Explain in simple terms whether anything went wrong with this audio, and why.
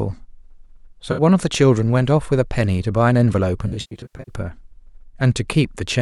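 Parts of the compressed speech stream went missing, a fault called AAC frame loss with concealment. The decoder patched each gap by reusing the last good sound. Around 1.11 to 1.21 s, about 64 ms lost, probably a few frames, leaves a brief smeared, noisy patch. From 3.67 to 4.34 s, about 384 ms of losses, the longest about a tenth of a second, make the speech sound watery and phasey.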